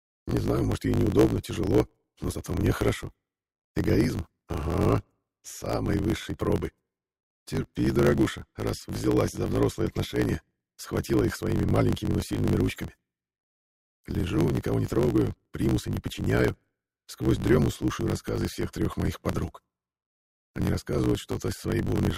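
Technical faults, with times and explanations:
Throughout: block size mismatch (truncated). Each block's tail is discarded, causing a 54.4 Hz buzz and 1.16x playback speed at normal pitch, which fits 1024-sample written blocks.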